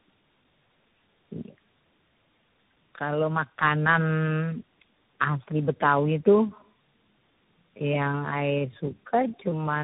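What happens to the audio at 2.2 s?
At 2.2 s, as throughout the clip, tandem speech coding through several narrowband codecs leaves the speech rough, muffled and warbly. A spectrogram shows nothing above 3.8 kHz and smeared harmonics.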